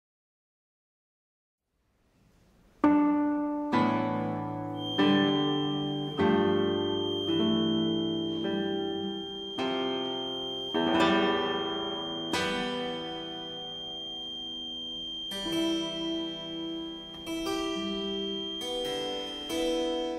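A feedback whistle starts at 4.72 s and runs to the end. It is a thin, steady tone at 3.2 kHz, roughly 10 dB under the audio, swelling and fading slowly in level. The likely cause is a speaker-to-microphone loop balanced just short of howling.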